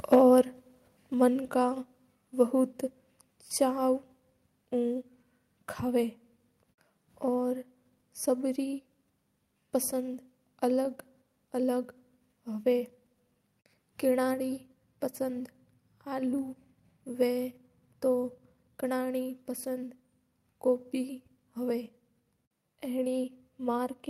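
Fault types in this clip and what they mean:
microphone overload: from 0.12 to 0.19 s, speech peaks run about 4 dB past the converter's limit, roughly one sample in twenty flattened, giving a harsh crackle, likely from excessive input gain.
microphone volume stepped down: level drops suddenly at 0.15 s by about 2 dB, then at 1.14 s by about 4 dB, likely automatic input-gain reduction after clipping.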